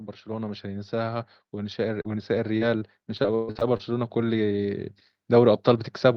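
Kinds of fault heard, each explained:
Automatic gain rising: The gain control judged the input too quiet and kept turning it up, so the speech and background swell together from 0.25 s to the end.
Repeated packet loss (robotic sound): Audio kept arriving late or missing, and each hole was patched with the preceding sound, giving choppy, robotic speech from 1.95 to 3.93 s, longest gap 124 ms.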